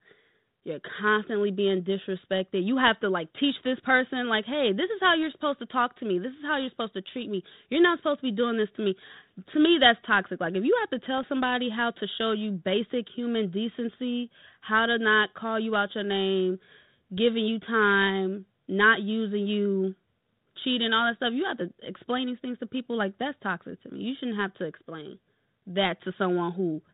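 Bit errors on an ADPCM link strike at 11.18 to 11.24 s, after "if you have to": flipped bits upset the decoder's predictor, causing a brief rough pop.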